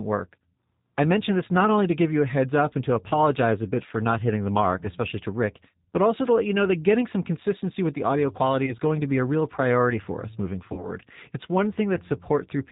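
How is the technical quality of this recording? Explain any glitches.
The recording is plainly degraded by low-bitrate speech coding and has two brief dropouts.

Throughout, the G.729 codec at 8 kbit/s rebuilds speech from a vocal tract model and sparse pulses. Nothing above 4 kHz survives, so speech sounds rough and synthetic.

At 8.66 to 8.74 s, VoIP packet loss concealed by the speech codec stretches the last sound into a fading buzz. About 20 ms is missing, which fits one lost packet.

At 10.73 to 10.90 s, a longer gap of about 40 ms, which fits two lost packets, is extrapolated the same way. Afterwards the speech stays weak and smeared briefly while the decoder recovers.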